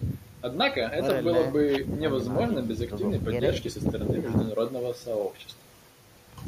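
No technical faults are audible anywhere in the recording.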